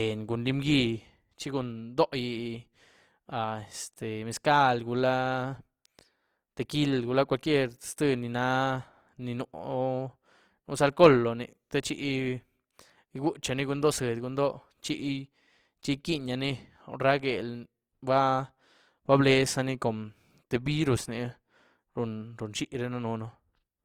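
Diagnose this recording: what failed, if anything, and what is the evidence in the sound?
Opus compression, throughout the clip, at the codec stage. The speech carries a plainly audible grainy, rough texture rather than the swirling holes of MP3, with content still reaching about 20.2 kHz, so the bandwidth was not narrowed. That points to Opus in its full-band CELT music mode, likely running at a low rate near 24 kbps: starved bands are kept at the right energy but refilled with folded copies of lower bands or noise, roughening the voice.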